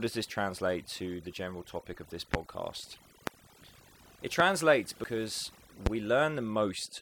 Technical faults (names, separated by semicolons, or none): overdone noise removal; loud pop; damaged data in a compressed stream